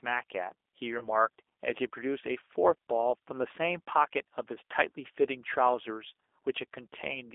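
Speech here has passed through a G.729 codec at a rate consistent with 8 kbit/s, which resynthesises the voice from a filter, pitch predictor and sparse pulses. The result is plainly rough and synthetic, confined to roughly 300 Hz to 3.6 kHz with nothing above. VoIP packet loss, concealed by the speech codec, strikes twice. About 20 ms of audio went missing around 0.99 to 1.08 s and again at 3.88 s, each fitting a single lost packet. The decoder extrapolated from its last pitch and filter, so each gap becomes a brief, fading smear of buzzy tone or coloured noise, with the voice weak or distorted just afterwards.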